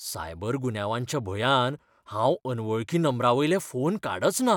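Listening to the speech here, nothing technical stood out.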